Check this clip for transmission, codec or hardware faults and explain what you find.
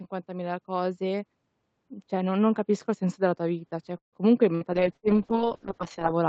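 Several call-path faults appear in this speech clip, clustered in its second half, after two gain swells early on.

Automatic gain rising occurs from 0.26 to 1.34 s (about 4 dB) and from 2.08 to 3.77 s (about 3 dB). The gain control judged the input too quiet and raised its level slowly, so voice and background grow louder together. That gradual, shared swell separates it from a speaker simply getting louder.

A call audio freeze runs from 3.97 to 4.16 s. The last sound is held briefly, then about 130 ms of silence follows, likely because delayed packets emptied the jitter buffer. The speech then resumes where it stopped, nothing skipped. That is what separates it from packet loss.

A burst of packet loss hits at 4.55 to 4.64 s and again at 4.97 to 5.06 s. Each time about 60 ms of audio never arrived. The receiver stretched the preceding sound into a fading buzz or hiss, and the speech picks up further along with that piece gone. 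That makes these small jumps rather than pauses.

A call bitrate drop starts at 4.78 s and lasts to the end. The Opus encoder falls from 40 to 6 kbps after the bandwidth estimate collapsed, sitting at the lowest rate for about 1.4 s. The speech turns rough and watery. It is a sustained change in texture, not a brief dropout, and the band above 8 kHz was already absent beforehand.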